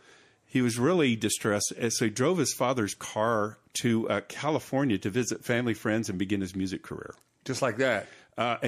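At 3.73 s, after "drove his father's car", comes pre-echo. An 18 ms hiss, about 12 dB up, smears the attack. That suggests 36 ms blocks never switched short.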